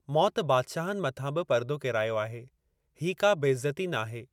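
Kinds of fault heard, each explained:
No kinds of fault are heard in this clip.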